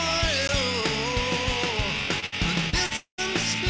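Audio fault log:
0.48 s, block of digital silence: the sound cuts straight to silence for 15 ms and snaps back with no fade. The output buffer was likely not filled in time, leaving a short run of silence.
2.20 to 2.92 s, short concealed packet loss at 2.20–2.24, 2.70–2.74 and 2.86–2.92 s: brief smears and wobbles where 20 to 40 ms of audio never arrived. The receiver stretched the preceding sound over each hole, then blended back into the real signal.
2.26 to 2.34 s, burst of packet loss: a held buzz or fading hiss lasting 60 ms before the sound resumes further on. Several consecutive packets went missing, so the receiver continued the last sound, lowering it as the gap grew.
2.96 to 3.20 s, long network dropout: the sound is drawn out as a fading continuation, then falls to silence for about a tenth of a second before returning with 220 ms gone. This is likely a stretch where no packets reached the receiver at all.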